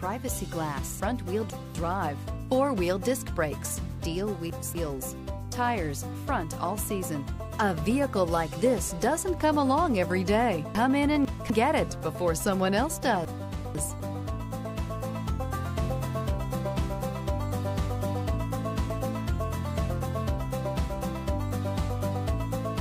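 At 1.0 to 1.75 s, 4.0 to 4.75 s, 10.75 to 11.5 s and 13.25 to 14.0 s you get chunks out of order: a 250 ms block lands two chunks late, so each spot sounds briefly jumbled, with three hard joins.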